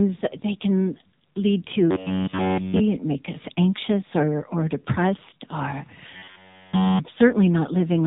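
From start to finish the speech sounds buzzy and synthetic, boxed into a narrow band with nothing above 3.8 kHz. That is heavy AMR narrowband mobile codec damage: a low-bitrate vocal-tract model, fitting roughly 6.7 kbps, rebuilds each 20 ms frame from a few pulses.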